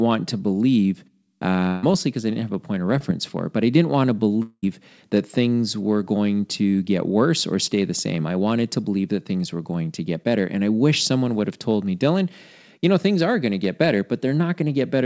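Speech carried over a call link whose band stops at 8 kHz, which fits G.722 at 64 kbps, has three loss events. From 1.68 to 1.85 s there is a burst of packet loss. About 140 ms of audio never arrived, and the receiver bridged the hole with roughly 150 ms of synthesized continuation. That continuation extends the last sound and dies away as the gap lengthens. The speech then picks up later in the utterance with that stretch gone, so the listener hears a held, fading tail followed by a jump. At 2.99 to 3.02 s a short concealed packet loss removes about 20 ms. The decoder patched it with roughly 15 ms of extrapolated signal before blending back into real audio, which leaves a brief smear in the speech rather than an audible gap. From 4.42 to 4.64 s the sound again turns into a fading extension of what preceded it, then drops into silence, about 200 ms filled in all, the last 40 ms of it silent, before the speech resumes further along, with about 200 ms of content missing. 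The length of the outage and the fade into silence point to a long network dropout as the likely cause, with the receiver's concealment exhausted before the stream recovered.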